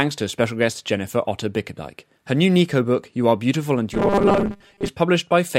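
From 3.94 to 4.88 s the speech turns into a robotic sound, a rigid 200 Hz metallic buzz. This is likely caused by a short buffer of about 5 ms being repeated for roughly half the time.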